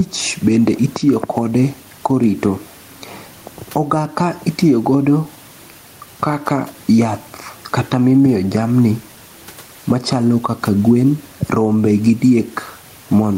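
Across the whole clip, the input gain is likely set far too high, so a fast limiter or compressor clamps down on every loud syllable and releases in each pause. The result is gain pumping: the room noise, which sits about 37 dB under the speech, swells up in the gaps and then ducks by about 10 dB as each loud sound arrives. Loud and quiet passages end up flattened toward one level, and the speech sounds squashed and breathing.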